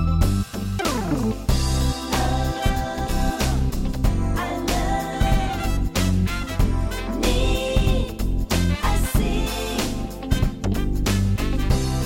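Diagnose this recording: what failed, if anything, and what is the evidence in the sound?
Nothing in the recording points to a failure at any stage, so there's nothing to diagnose here.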